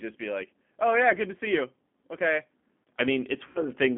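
From the start, the speech sounds narrow, slightly rough and synthetic, with nothing above about 3.5 kHz or below 200 Hz. This is the G.729 codec, whose damage is plainly audible. It rebuilds each 10 ms frame from a vocal tract filter, pitch predictor and a few pulses, at a rate that points to 8 kbit/s.

From 3.47 to 3.61 s the speech smears into a buzzy, fading tone and stays weak past the gap. This is VoIP packet loss concealed by the speech codec. About 80 ms went missing, which fits four lost 20 ms packets. The decoder extended its last pitch and filter at falling gain, and its frame-to-frame memory needed time to recover.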